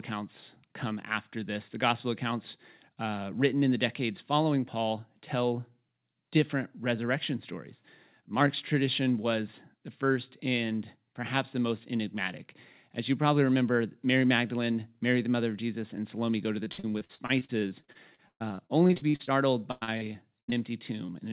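Right after "go to", from 16.64 to 19.29 s, repeated packet loss (robotic sound) sets in. About two dozen gaps, the longest about 119 ms, are each patched by stretching the preceding sound, so roughly a third of the stretch is synthetic. It sounds choppy, with pieces missing. A spectrogram shows harmonic stripes frozen into flat, copied blocks. The waveform repeats identical cycles, all below the 4 kHz ceiling of the narrowband call path.

A second burst of the same fault runs from 19.71 to 20.55 s, with six gaps of up to 100 ms. About a third of that span is concealed, and it has the same choppy, stuttering character.

From 21.06 to 21.10 s, a short concealed packet loss replaces about 20 ms with a continuation of the last sound. The result is a brief smear or wobble. On a spectrogram it shows as a tiny smoothed patch, and the waveform shows the patch blending back in.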